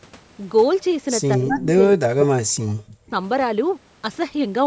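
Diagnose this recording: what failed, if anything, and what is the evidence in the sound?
Call processing: between 1.37 and 3.13 s the speech dips in pieces by as much as about 40 dB, likely speech suppressed in double talk.

Call processing: brief delayed copies sound at 1.52–1.65 s (243 ms behind, about 15 dB down) and 2.88–2.93 s (146 ms, about 30 dB down), likely echo leak. Unlike room reverb, these are discrete repeats.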